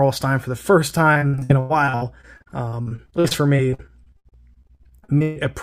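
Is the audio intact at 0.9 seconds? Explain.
No. At 0.91 s there is an underrun with held sample lasting about 3.4 ms. The output buffer ran dry, and the converter kept emitting its last value until fresh data arrived, so the waveform freezes into a flat segment. The sound stops with little or no click. Nothing appears to have been skipped, because playback picks up where it paused, so the resumption is soft.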